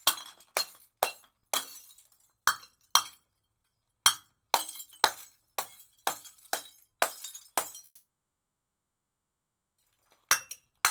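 A recording of everyday sounds with two timing faults near the end. From 7.85 to 9.80 s there is a call audio freeze: the last sound is carried on briefly as a fading buzz, then about 1.76 s of silence fills the wait. It is most likely caused by packets held up in transit until the jitter buffer ran dry. Unlike a dropout, nothing is lost, because the audio resumes exactly where it stopped, now running about 1.93 s late. From 10.62 to 10.82 s a jitter buffer slow-down follows. Repeated pitch periods add about 37 ms, so the sound plays at 85% speed and is audibly drawn out. The pitch stays the same, which separates it from a tape-style drag or a resampling error, where slowing would also lower the pitch.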